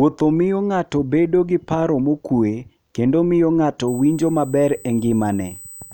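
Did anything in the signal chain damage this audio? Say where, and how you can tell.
Yes. From 3.88 s to the end of the clip, a steady whine at 8 kHz sits under the speech, roughly 20 dB below it. The damage happens in the analogue wiring, through power or ground, so this is USB whine. Its pitch never moves, and 8 kHz matches the 125-microsecond microframe rate of a high-speed USB bus. Each microframe pulls a burst of current, and that ripple couples into the audio path as a fixed tone.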